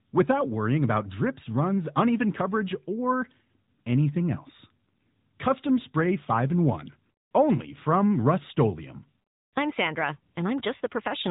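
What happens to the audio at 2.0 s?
At 2.0 s you're hearing the AMR narrowband mobile codec, which runs through the whole clip. It rebuilds speech from a vocal tract model and pitch-driven pulses, so it sounds plainly synthetic at its 10.2 kbps mode, and nothing above 3.8 kHz survives.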